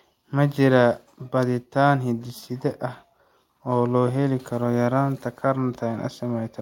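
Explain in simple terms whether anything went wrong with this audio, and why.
Nothing went wrong here: this bit of speech comes through without any dropouts, glitches or odd noises to catch the ear.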